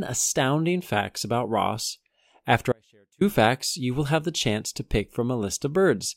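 From 2.72 to 3.21 s, an audio dropout to a faint residue leaves about 490 ms of faint leak, roughly 35 dB down. The waveform collapses abruptly, likely a brief signal loss, before "facts you will have".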